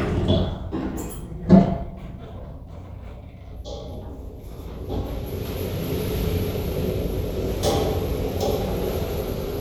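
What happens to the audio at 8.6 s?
Nothing goes wrong at 8.6 s: the sound plays through that moment intact, with no dropout, click, distortion or other fault.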